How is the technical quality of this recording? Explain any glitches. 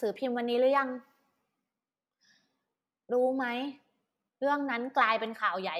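No glitches can be heard anywhere in this speech recording. There is no moment in it that calls for an explanation.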